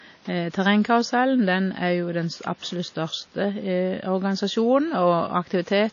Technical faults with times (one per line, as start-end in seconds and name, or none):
0.00-5.93 WMA compression